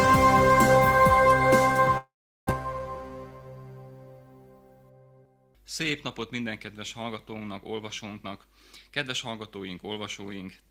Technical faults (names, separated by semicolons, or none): long network dropout; jitter buffer speed-up